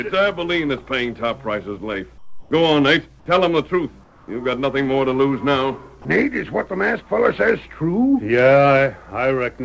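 Discontinuous transmission likely cut in during pauses, so comfort noise in place of the background fills 2.18 to 2.51 s and 4.04 to 4.28 s: a flat, featureless hiss, about 10 dB and about 3 dB quieter, over a call path with nothing above 8 kHz.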